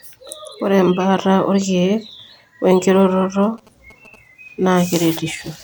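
Across the whole recording the speech sounds swirly and hollow, with smeared attacks. This is likely generation loss from about four MP3 passes, seen as patchy spectral holes below a 20.1 kHz ceiling. From 3.43 to 4.16 s, right after "we nkiroroto", GSM signalling bursts add a galloping dit-dit-dit of short buzzes at 217 Hz, about 30 dB below the speech, showing as grouped vertical stripes.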